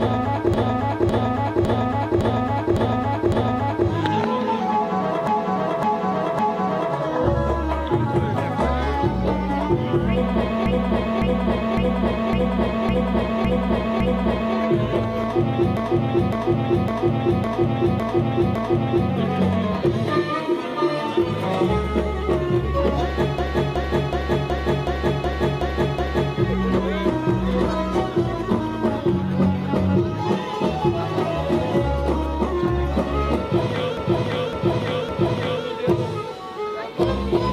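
Repeated frames stutter at 0.54–3.88, 5.27–6.95, 10.66–14.56, 15.77–19.11, 23.38–26.36 and 33.97–35.65 s. A 557 ms block (371 ms in the fifth) replays three to eight times. Unlike a dropout, nothing goes missing; the audio only lengthens.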